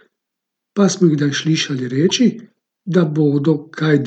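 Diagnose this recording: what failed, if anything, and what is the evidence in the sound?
Corrupt frame decoded, 2.09–2.11 s, after "smo jih kdaj slišali": a codec-stage blip where a couple of bit-damaged frames decoded anyway, misplacing spectral energy.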